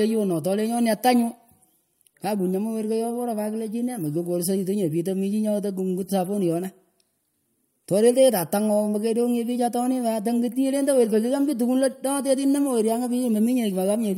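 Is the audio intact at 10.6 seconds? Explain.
Yes, the speech at 10.6 s plays through intact, with no fault at that moment.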